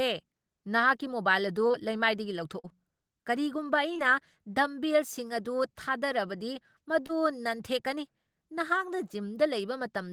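Brief smears and wobbles break into the speech at 1.67–1.76, 2.60–2.66, 3.94–4.00 and 7.06–7.11 s: short concealed packet loss, where missing 20–40 ms stretches were bridged by extending the preceding sound.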